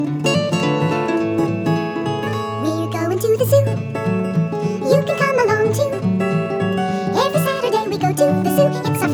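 Throughout the clip the audio runs fast and sits noticeably high, the signature of a wrong sample rate: everything plays 1.5 times faster and about 7 semitones higher, which fits material recorded at 32 kHz being played back at 48 kHz with no conversion. Unlike a pitch shift or time-stretch, where pitch and speed move independently, here both rise together by exactly the same ratio.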